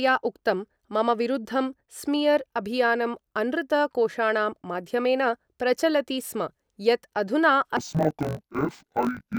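From about 7.77 s to the end, the speech falls into an interleaved-read-as-planar fault. Each 20 ms block of alternating left/right samples gets split in half per channel, so both halves play at half speed: the sound drops an octave and takes on a dull, robotic 50 Hz buzz.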